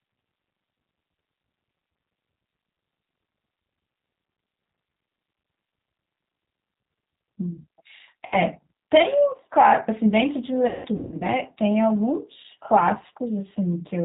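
Throughout, the speech runs through the G.729 codec at 8 kbit/s. The decoder rebuilds each frame from a vocal tract filter, a pitch predictor and a handful of pulses, and nothing above 4 kHz gets through, so the voice sounds band-limited, rough and plainly synthetic.

From 8.26 to 8.37 s there is VoIP packet loss concealed by the speech codec. About 60 ms of audio went missing, which points to two dropped packets, and the decoder filled the gap by extrapolating its last pitch and filter while lowering the gain. The sound smears into a short buzzy tone or coloured noise that fades.

From 10.67 to 11.24 s the losses return, scattered over about half a second with the longest gap 180 ms. The same concealment repeats, leaving fading stretches of buzz or coloured noise with a weakened, distorted voice between them as the decoder struggles to rebuild from damaged frames.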